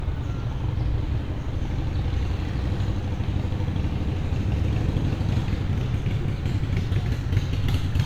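No technical faults are audible.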